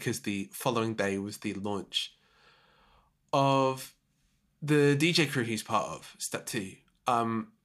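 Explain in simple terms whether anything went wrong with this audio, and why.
Nothing went wrong with this audio, since there is no fault to point to anywhere in it.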